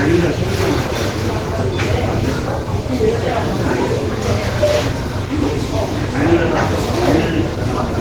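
From start to finish the sound is muffled, hoarse and grainy, likely Opus compression stuck in hybrid mode, which fits a starved rate near 16 kbps.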